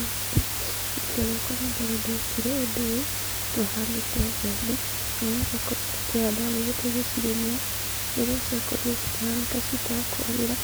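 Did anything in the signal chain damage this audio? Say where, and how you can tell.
Yes. Sample-format conversion: low bit depth with dither, just 4 bits. A constant even hiss runs throughout, roughly as loud as the speech, with no grinding distortion.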